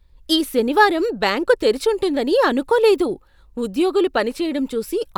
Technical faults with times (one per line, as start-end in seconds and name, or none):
none